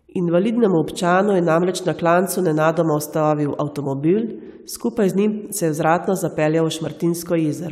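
Speech runs without any technical fault, with no interruption, distortion or level problem at any point in the recording.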